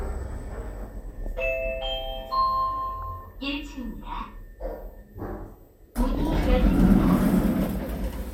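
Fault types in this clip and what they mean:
DAB burbling: Weak digital radio reception let bit errors, at a rate of a fraction of a percent, slip past the error correction into the MP2 audio data, so corrupted samples put short blips of noise into individual sub-bands and corrupted scale factors make sub-bands leap in level for up to a frame. Here it comes as four bursts of burbling over the sound, at 1.06–1.42 s, 2.89–3.32 s, 5.95–6.27 s and 7.63–7.94 s, each spanning roughly twenty frames.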